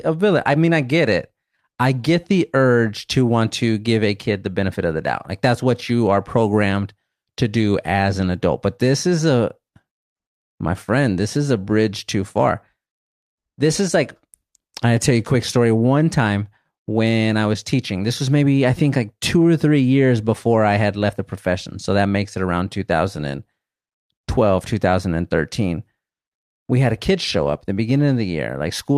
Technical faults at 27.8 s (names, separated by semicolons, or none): none